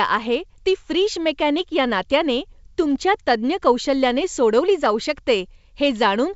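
Speech over a wideband telephone path consistent with G.722 coding, band-limited to about 7 kHz with at most a faint hiss in the upper band, and no technical fault is present.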